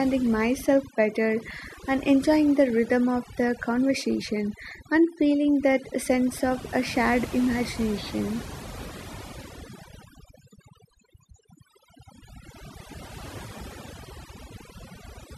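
Throughout the speech, overdone noise removal is audible: heavy-handed noise reduction has clamped individual frequency bands down whenever they neared its noise estimate, taking softer vocal detail too. The background collapses into near silence sprinkled with twinkling specks. A spectrogram would show scattered isolated dots between words and ragged, gappy harmonics.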